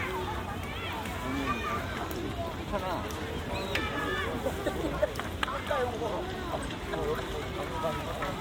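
No technical faults can be heard anywhere in the audio, so there is nothing to describe in time order.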